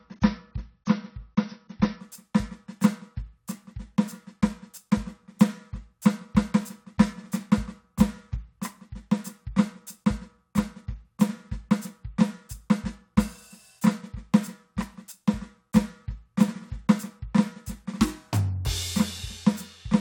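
For the first 2.0 s of this music the top end is dull and smeared, with nothing above 6.6 kHz, then it suddenly brightens without a gap: an adaptive stream starting at a low bitrate, consistent with roughly 24 kbit/s AAC stepping up to about 96 kbit/s.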